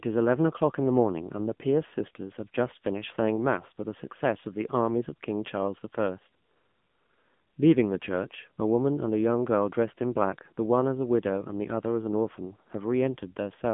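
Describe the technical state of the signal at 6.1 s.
At 6.1 s the AMR narrowband mobile codec is active, as throughout. The sound stops near 3.6 kHz and sounds buzzy and synthetic, which fits a low bitrate around 8 kbps.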